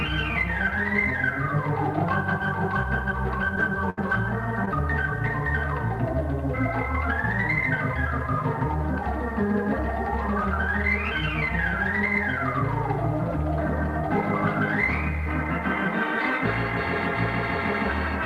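At 3.90 s a burst of packet loss begins. Several consecutive packets failed to reach the decoder in time, so the receiver had nothing to play and extended the last sound it had, fading it down across about 72 ms. When real audio returns near 3.99 s, roughly 60 ms of the original has been skipped. The result is a held, dimming continuation followed by a jump forward, with that stretch of sound simply gone.

At the tail of that burst, from 3.97 to 3.99 s, one lost packet was rebuilt from error correction. The following packet carried a low-bitrate duplicate of it, the Opus in-band forward error correction copy, and the decoder played that instead of concealing. This 20 ms frame is why the burst ends without a further hole. It comes out coarser and grainier than the surrounding audio, a short rough patch as normal decoding resumes.

At 4.65 s there is a short concealed packet loss lasting until about 4.69 s. 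Around 20 ms of audio arrived too late to decode, and the receiver patched the hole by continuing the preceding sound for about 14 ms before crossfading back into the real signal. It is heard as a quick smear or small wobble, brief enough that a short transient in that spot can vanish entirely.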